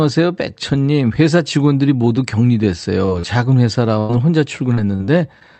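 Around 3.05 to 3.09 s, and again from 3.19 to 3.25 s, there is short concealed packet loss: audio packets failed to arrive in time, leaving holes of about 20 ms and then 40 ms. The receiver bridged each hole by extending the speech that came before it and then merging back into the real signal. In this clip that is heard as two quick smears or wobbles in close succession. A brief consonant may drop out entirely.

From 3.99 to 4.11 s a burst of packet loss removes about 100 ms in one stretch, too long a run for a clean patch. The concealment carries the last sound forward while letting it fade. A voiced sound turns into a held, flattening buzz, and an unvoiced one into a dying hiss. The speech then resumes at a later point, so the material from that tenth of a second is simply missing.

Between 4.75 and 5.43 s the loss turns into repeated packet loss, heard as a robotic sound. Four separate gaps, none longer than about 42 ms, take out roughly 100 ms in all, about 15% of the span. 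Each new hole is patched before the speech has properly recovered from the previous one, giving choppy speech with small pieces dropped out. Throughout the clip the call codec's band limit near 8 kHz cuts off the top end.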